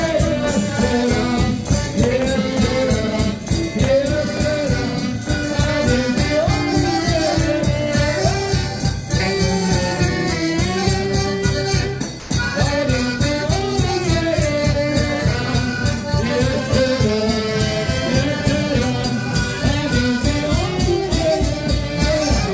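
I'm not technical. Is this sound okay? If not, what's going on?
No. At about 12.2 seconds, for roughly a tenth of a second (12.20 to 12.30 s), the sound briefly drops out and a soft, steady hiss fills the gap before the sound returns. That is most likely sound dropped by the voice detector: the sending side judged that moment to be background, paused sending, and the receiving end played gentle filler noise, called comfort noise, until the sound resumed.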